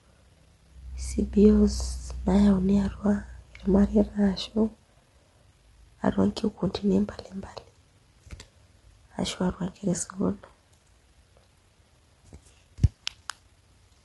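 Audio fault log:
throughout, low-delay AAC compression: likely a short-frame AAC-ELD encode, consistent with about 32 kbps, smearing pitch harmonics so speech sounds rough and grainy, with nothing above 11.6 kHz.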